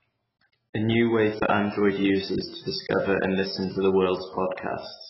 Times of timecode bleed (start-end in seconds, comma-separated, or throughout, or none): none